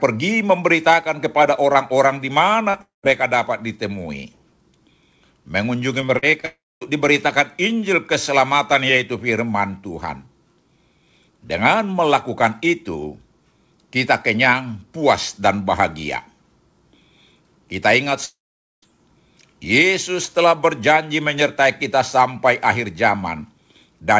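At 2.70 to 2.76 s the speech briefly smears, a short wobble where about 40 ms of sound is patched over. This is short concealed packet loss: that audio never reached the decoder in time, so the receiver extended the preceding sound and then blended back into the real signal.

Almost immediately, from 2.82 to 3.05 s, the sound trails off into a fading buzz and then roughly 150 ms of silence before speech resumes with a piece missing. This is likely a long network dropout, with about 220 ms of audio lost and only partly masked by the receiver stretching out the last sound.

Between 6.01 and 6.45 s the speech turns choppy, with pieces missing. Here repeated packet loss produces five separate gaps, the longest about 41 ms. Each is filled by continuing the previous sound, so about 27% of that stretch is synthetic patching rather than real audio.

That choppy passage runs straight into a second break at 6.45 to 6.83 s. 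A decaying buzz gives way to about 240 ms of silence. It is likely another long network dropout, in which about 360 ms of sound never arrived and was not played.

The longest break comes at 18.25 to 18.84 s, where a brief smeared tail fades into nearly half a second of silence, roughly 480 ms. This is likely a long network dropout, and about 580 ms of audio is lost outright. Across all of these breaks the surrounding sound carries the G.722 call codec's ceiling, with nothing above 8 kHz.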